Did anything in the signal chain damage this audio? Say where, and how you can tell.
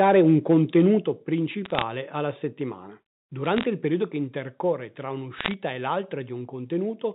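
Yes. The opening, 0 to 0.85 s, shows microphone overload, likely at the converter. The loudest syllables have flattened tops, peaks were driven about 3 dB past full scale, and a small share of samples is clipped. The harsh crackle follows loudness, which separates it from line noise.

The microphone volume is stepped down twice in call processing: about 5 dB at 1.02 s, right after that clipped opening, and about 2 dB at 4.08 s, between "il periodo" and "che intercorre tra". Voice and background fall together in one instant, so this is not the talker getting quieter. It is likely automatic gain control reacting to the peaks.

Bit errors on the digital phone line come in three bursts: 1.65 to 1.83 s, just before "alla settimana"; 3.44 to 3.65 s, between "alla settimana" and "il periodo che intercorre"; and 5.38 to 5.54 s. They are sharp single-sample ticks over intact speech, at a bit error rate of roughly 0.3 to 0.5 percent. 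Unlike clipping they ignore level, and unlike dropouts the sound never stops.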